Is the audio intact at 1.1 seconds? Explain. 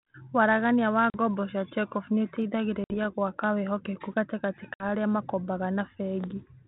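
No, there's a dropout right there: packet loss on an ADPCM call, running from 1.10 to 1.18 s. About 40 ms of audio, roughly a couple of packets, is gone and replaced by silence, so you hear a sharp-edged hole. Because the G.726 decoder's adaptive predictor and step size lose track of the sender's during the gap, the speech comes back a bit off in level or with a click and some roughness before it settles.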